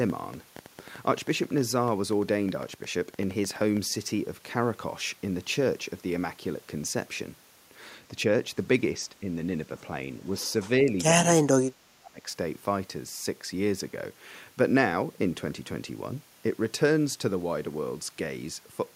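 From 0.10 to 3.78 s, a train of clicks runs over the speech. There are roughly thirty of them, about 8.2 per second, at an uneven pace. Each has much the same shape and peaks a few decibels above the speech. They sound like rapid ticking, also heard in gaps. The likely source is interference from nearby equipment or a faulty connection or power supply injecting repeated pulses.

Speech suppressed in double talk follows twice. From 9.10 to 9.28 s, the voice dips slightly, by a few decibels, for a brief moment. From 11.44 to 12.26 s, the drop is far deeper, around 30 dB. For most of that stretch the voice nearly vanishes or breaks into pieces. The likely cause is an echo canceller that could not separate this talker from far-end echo while both spoke, so it turned both down.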